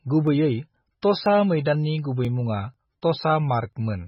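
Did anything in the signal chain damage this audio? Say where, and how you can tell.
Yes. MP3 compression runs through the whole speech clip at the codec stage. Nothing survives above 5.5 kHz, and the heavy watery, swirly texture fits a bitrate near 16 kbps. The encoder is likely starving for bits, cutting the treble and switching weak frequency lines on and off between frames.

Audio missing between chunks occurs at the buffer stage at 0.27, 0.77, 1.26, 1.75, 2.25, 2.74, 3.23 and 3.73 s. These are short skips spaced 0.5 s apart, each dropping a few milliseconds with the edges joined directly. This regularity likely reflects a recorder losing audio at each chunk handover.

Pre-echo appears at 3.02 s, also a codec fault. A hiss of about 12 ms arrives just ahead of a sharp attack, which sounds smeared. The attack sits late in a transform block, so quantisation noise sized for it spills into the quiet lead-in.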